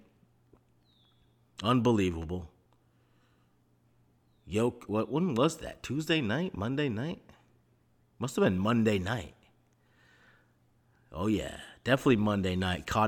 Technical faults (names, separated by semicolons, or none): none